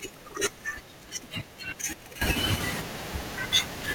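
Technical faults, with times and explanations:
2.22 s to the end, sudden gain jump: speech and background noise rise together by about 12 dB at one sample, likely a gain change applied without a ramp. The waveform envelope steps up abruptly, and the spectrogram brightens evenly across all frequencies.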